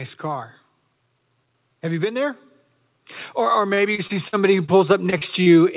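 Speech carried over a narrowband call path, with nothing above 4 kHz, which fits G.711 A-law at 64 kbps. From 1.67 s to the end, automatic gain rising lifts the level gradually, so speech and background swell together. Repeated packet loss between 3.74 and 4.71 s, and again from 5.10 to 5.55 s, leaves gaps patched by extending the previous sound, giving choppy, robotic speech with holes up to 49 ms long.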